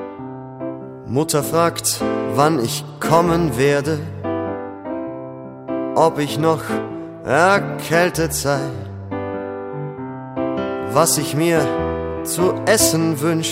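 Nothing technically wrong turns up anywhere in the sound, so there are no problem moments or causes to point to.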